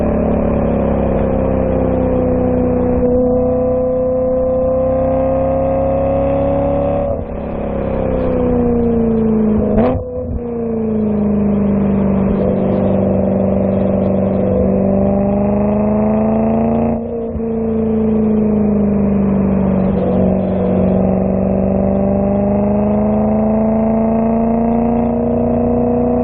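No technical faults can be heard anywhere in this audio.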